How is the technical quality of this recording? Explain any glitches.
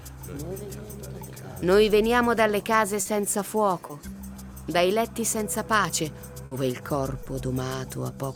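The recording has four brief dropouts of the kind heard on network calls, where audio arrives late or never arrives and the receiver patches over the gap.

Short concealed packet loss occurs three times: 3.01 to 3.07 s (40 ms), 3.87 to 3.91 s (20 ms) and 7.23 to 7.27 s (20 ms). Each time, a slice of audio failed to reach the decoder, which extended the preceding sound and then crossfaded back. You hear a quick smear or wobble. On a spectrogram, the harmonics or noise flatten into a short, uniform patch. On the waveform, the cycles repeat too regularly.

A burst of packet loss runs from 6.45 to 6.53 s, with 60 ms of audio lost. The decoder kept repeating the last sound while fading it down, so a tone turns into a held buzz and other sounds into a dwindling hiss. Playback then resumes later in the audio, skipping the lost span. A spectrogram shows a frozen band that dims before the real content returns abruptly. 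The waveform shows a tapering envelope.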